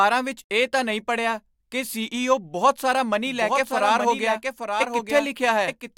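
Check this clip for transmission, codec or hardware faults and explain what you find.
One fault is present. A doubled audio track starts at 3.27 s, just after "ਬਹੁਤ ਸਾਰਾ", and runs to the end. A second full-band copy of the speech, likely captured again through a slower path, trails about a second behind at roughly 5 dB quieter. It cuts in abruptly, without any room colour or decay.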